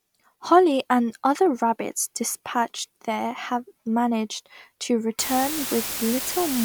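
From 5.19 s to the end, low bit depth with dither: 4-bit rounding with dither leaves a steady hiss nearly as loud as the speech, but no gritty distortion, unlike undithered quantisation.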